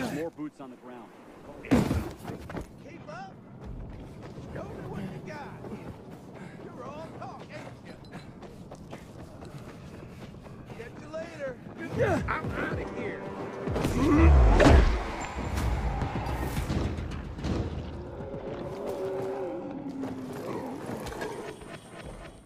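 From 0.97 s to 8.39 s there's a call bitrate drop: the audio turns rough and muffled, fitting the encoder falling from around 96 to 28 kbps and sitting at the floor for about 4.85 s.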